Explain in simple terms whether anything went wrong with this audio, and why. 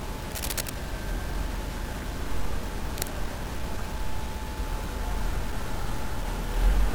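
The recording was most likely stored with too few levels of loudness, fitting a roughly 6-bit signal cut off without dither (low bit depth without dither), so it sounds grainy and gritty throughout.

A worn cable or connector likely shifted, causing cable scratch noise: brief scratchy rustling bursts from 0.32 to 0.70 s and again from 2.95 to 3.11 s.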